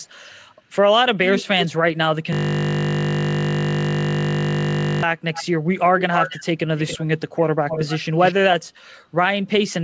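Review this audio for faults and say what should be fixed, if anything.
A delayed second copy of the speech trails behind the talker at 1.34–1.66 s, 5.33–5.45 s, 5.98–6.46 s, 6.77–7.06 s, 7.69–7.99 s and 8.18–8.34 s. It sits roughly 5 to 15 dB below the direct speech and lags it by 261 to 278 ms, drifting slightly later as the clip goes on. This is an echo leak, likely from a far end playing the call on a loudspeaker whose echo canceller let part of the microphone pickup through and sent it back. To prevent it, the far end should use a headset or fix its echo cancellation so the canceller fully suppresses the loudspeaker signal.

From 2.33 to 5.03 s the speech gives way to a steady, mechanical buzz at 50 Hz. A single 20 ms slice of audio is being replayed exactly, well over a hundred times in a row. This is a system hang loop: the computer or driver froze while the sound hardware kept cycling through the same ring buffer, and the short loop length is what makes it a buzz rather than a stutter. 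To prevent it, find and fix whatever is stalling the audio thread or driver, such as CPU starvation, a blocking call or a faulty driver, so the buffer keeps being refilled.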